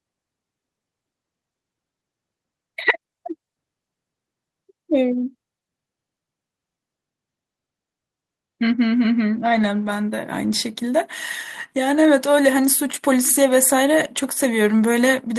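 No technical faults can be heard anywhere in this speech recording. There is no moment in it that calls for a time stamp or an account of something going wrong.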